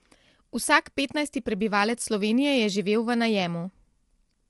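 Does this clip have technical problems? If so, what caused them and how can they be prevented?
Yes. The speech sounds rough and grainy throughout, with nothing above 11.7 kHz. The likely cause is low-delay AAC compression, whose short frames blur harmonics at a rate that fits about 32 kbps. Prevent it by raising the bitrate or using a longer-frame codec when delay allows.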